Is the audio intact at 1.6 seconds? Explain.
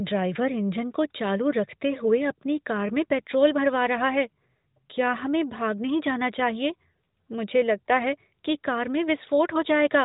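Yes, the speech is intact at 1.6 seconds, with no dropout, click or other fault there, only the steady narrowband character of the AMR narrowband mobile codec, whose output stops at about 3.8 kHz.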